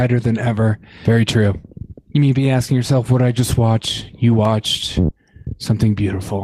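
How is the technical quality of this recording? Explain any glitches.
There's one glitch worth flagging. At about 5.07 to 5.11 s there's a short concealed packet loss. Roughly 20 ms of audio never arrived in time, so the receiver improvised about 13 ms by extending the preceding sound before easing back into the real signal. You hear it as a quick smear or wobble.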